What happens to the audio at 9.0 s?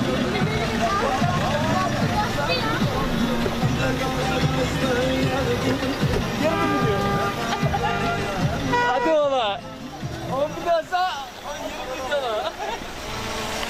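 Nothing goes wrong at 9.0 s; the audio carries on intact through that moment.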